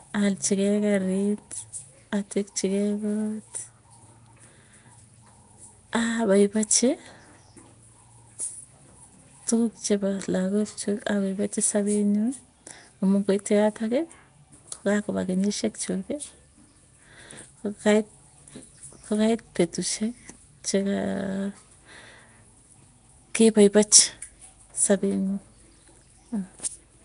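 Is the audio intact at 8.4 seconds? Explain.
No. At 8.4 seconds, as throughout the clip, the speech shows what is likely Nellymoser compression: blocks coded with scarce bits, weak bands replaced by noise, and nothing above 10.6 kHz. The result is a plainly audible rough, hissy halo and a smeared, underwater quality.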